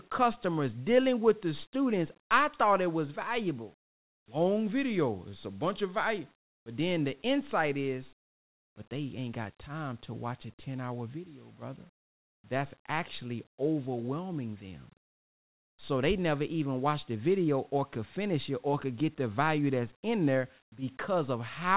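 A speech recording over a call path whose codec passes nothing above 4 kHz, consistent with G.711, shows two faults. Discontinuous transmission likely stopped the sender during pauses, so comfort noise in place of the background fills 3.86–4.28, 6.42–6.66, 8.2–8.76 and 11.96–12.44 s with flat, featureless hiss about 11 to 16 dB quieter. A slow voice detector likely missed the restarts too, producing onset clipping at 4.25–4.28 s (30 ms) and 12.42–12.44 s (20 ms), where speech begins abruptly without its soft start.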